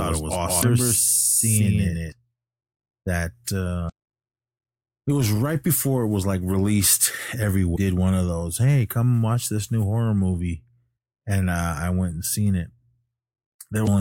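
From the very start until 2.12 s, everything is heard twice, an equally loud clean echo trailing about 150 ms behind and cutting off abruptly. This is a doubled audio track, likely from the same signal being captured a second time by a slower path. Brief glitches at 0.59–0.63 s, 3.86–3.90 s, 7.72–7.77 s and 13.83–13.89 s come from damaged data in a compressed stream, where the decoder misreads corrupted frames and resynchronises.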